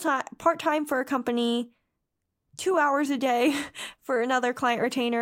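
Speech recording, with no technical faults to report.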